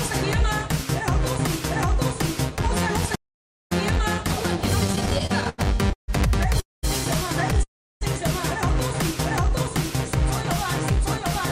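At 3.15 s the sound just stops for about 0.55 s and resumes at 3.72 s. That's a playback stall, likely the player running dry or its thread getting blocked.

From 4.87 to 6.10 s there's stutter from repeated stalls: fifteen short gaps, the longest 150 ms, patched by stretching the last sound. Late packets kept emptying the jitter buffer, so it drags, but nothing's lost.

Then there are two call audio freezes, likely packets held up in transit. At 6.60 to 6.85 s the last sound hangs and fades, then goes silent for about 0.18 s. At 7.63 to 8.03 s the same happens, with about 0.33 s of silence. Both pick up where they left off.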